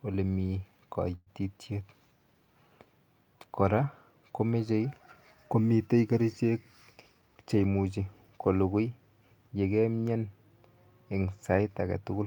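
Speech with two timing faults. From 1.15 to 1.30 s there is a call audio freeze: the last sound is stretched into a fading buzz that ends in about 30 ms of silence, likely from packets held up in transit. Unlike a dropout, nothing is lost. The speech resumes where it stopped, about 112 ms later. Right after "komitei kerichek", from 7.08 to 7.86 s, a jitter buffer speed-up plays the speech at about 114% speed, trimming about a tenth of a second in small pitch-period cuts. The pitch stays the same, which separates this from a plain playback-rate change.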